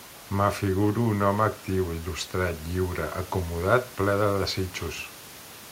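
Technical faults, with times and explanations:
Nothing stood out on listening to this speech, with the room's background noise sitting about 23 dB below the talking.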